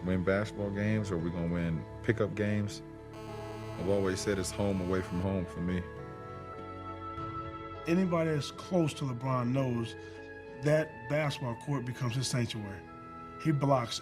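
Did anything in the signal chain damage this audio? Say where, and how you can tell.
Yes. A GSM phone buzz enters at the analogue wiring from 3.14 to 5.24 s: a steady buzz at 217 Hz with many harmonics, about 15 dB below the signal. A nearby phone on a call bursts at that rate, and the audio circuitry rectifies those radio pulses into sound.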